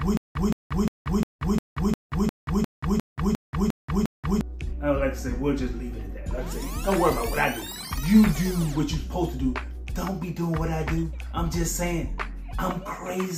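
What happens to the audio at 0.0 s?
Right from the start it's already a stutter with silent gaps, running until about 4.41 s. A short burst of about 171 ms repeats twelve times, each followed by roughly 182 ms of dead silence, every 353 ms. That's likely a stalled stream replaying its last fragment, and the audio meant for that stretch is gone.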